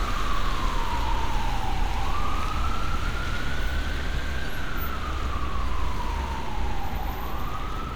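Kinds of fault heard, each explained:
Periodic USB or driver dropouts: a tiny slice of sound is skipped every 0.1 s from 3.87 s, giving strictly regular ticks, unlike random clicks.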